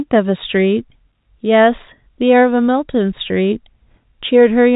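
No technical faults can be heard anywhere in this speech.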